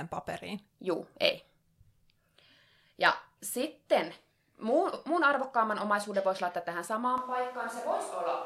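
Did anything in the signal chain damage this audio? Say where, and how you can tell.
Yes. At the analogue wiring and microphone stage, the close microphone's feed likely failed or was dropped at 7.18 s, leaving a more distant microphone to carry the speech to the end of the clip. The change is abrupt. The speech turns roomy and hollow, loses low end and falls by about 5 dB. A room noise floor roughly 30 dB below the speech also becomes audible, because the farther pickup hears more of the room.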